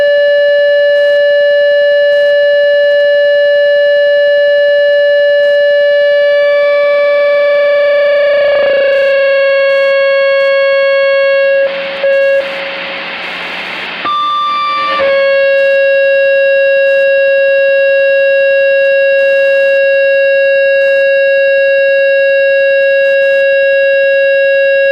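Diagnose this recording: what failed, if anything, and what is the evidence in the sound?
The failure is in the analogue wiring: Wi-Fi interference runs through the whole recording. A faint, steady ticking sits roughly 35 dB below the sound, repeating every 102.4 ms, just under ten ticks a second. A nearby Wi-Fi radio's beacon bursts are being picked up and rectified by the analogue circuit, so each transmission becomes a click. Mains hum or buzz would be a continuous tone at 50 or 60 Hz and its harmonics, not discrete ticks at this fixed beacon rate.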